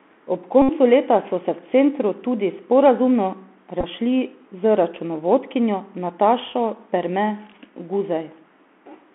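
The whole clip runs through a Bluetooth CVSD headset codec, which fits 64 kbps CVSD. The audio is squeezed to about 200 Hz–3.4 kHz, with plainly audible granular hiss and scratchy s sounds. At 0.62–0.69 s, just before "leta so se v", a Bluetooth headset packet repeated fault replays stale packets across roughly 68 ms, giving a steady buzz near 267 Hz. At 3.81–3.84 s, right after "v centru tudi sporazumno", the repeats come scattered in short runs of a few milliseconds, so you hear quick ticks rather than a sustained buzz.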